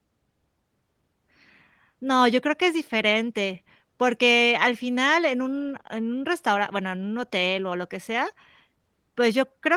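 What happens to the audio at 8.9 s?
Nothing goes wrong at 8.9 s: the speech there is intact, carried through the Opus voice compression with no fault at that moment.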